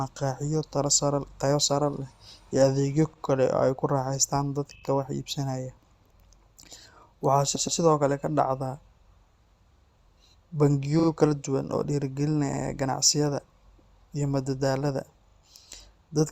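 Repeated frames stutter the speech at 3.13, 4.75 (after "ku raaxaystaan"), 7.55, 10.99, 12.53 and 15.29 s. Blocks of 40 to 120 ms replay, each adding 80 to 240 ms.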